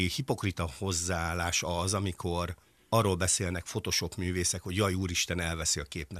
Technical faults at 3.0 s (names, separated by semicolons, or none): none